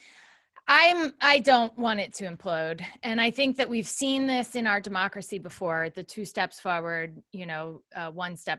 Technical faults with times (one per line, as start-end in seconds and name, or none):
none